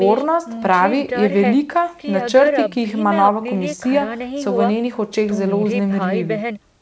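Nothing stood out on listening to this speech recording, so there is no technical fault to describe.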